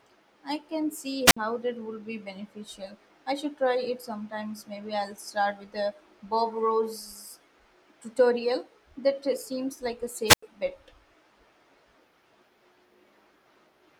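Wireless microphone squelch dropouts interrupt the speech at 1.25 to 1.37 s and at 10.26 to 10.43 s. The radio signal fades, a brief burst of hiss rises, and the receiver mutes for about 57 ms and then 92 ms. The waveform shows flat gaps, and the spectrograms show broadband noise leading into empty columns.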